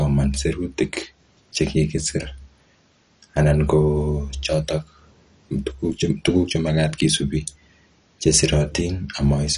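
MP2 compression, likely, runs throughout: the speech sounds dull, with nothing above 11.3 kHz, and carries a plainly audible gurgling, granular roughness. This fits roughly 48 kbps, where Layer II lacks the bits to keep its upper sub-bands and coarsely quantises the rest.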